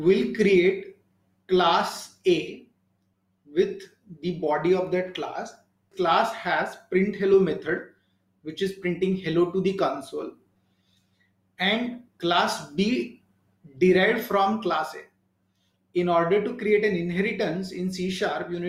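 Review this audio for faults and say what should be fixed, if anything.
A skip ahead occurs at 5.91 s, with the splice settled by 6.04 s. Roughly 400 ms of audio is missing, and the two sides are butted together with no gap. Audio was lost in transit, or the jitter buffer discarded it when it overflowed while later audio was already queued. On a waveform, the envelope changes abruptly with no silent dip. A spectrogram shows a vertical seam where harmonic tracks break off and restart mismatched. Prevent this by sizing the jitter buffer for burst arrivals and letting it drain gradually instead of dropping whole stretches.

A jitter buffer speed-up runs from 6.95 to 7.59 s at 106% speed, removing roughly 40 ms, and again from 8.18 to 9.34 s at 107% speed, removing roughly 100 ms. The buffer held more delay than its target, so the receiver repeatedly cut out pieces one or a few pitch periods long. 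The result plays faster at unchanged pitch and sounds slightly hurried. A spectrogram shows harmonics at the same heights but events squeezed horizontally. The waveform shows many tiny splices between cycles. Prevent this by smoothing network delay upstream or by spreading buffer reduction over longer, quieter passages.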